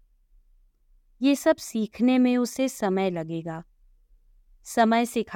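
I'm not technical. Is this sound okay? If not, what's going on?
Yes, nothing in this speech recording stands out as a technical problem, so there's nothing here to worry about.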